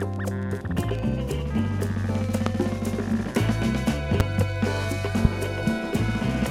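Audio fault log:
2.46–2.49 s, 4.20–4.23 s and 5.25–5.28 s: loud pop. Three single sharp pops, each about 30 ms long, peaking about 20 dB above the surrounding sound, which continues underneath. The likely cause is a sudden voltage pulse, such as a switch transient or static discharge.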